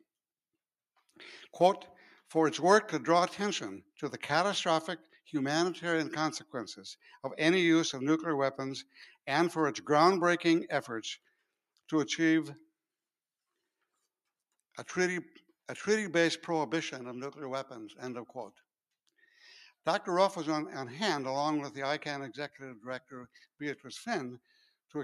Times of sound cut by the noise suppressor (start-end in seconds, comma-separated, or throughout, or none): 5.03-5.28, 8.84-9.17, 11.22-11.44, 23.00-23.86, 24.40-24.70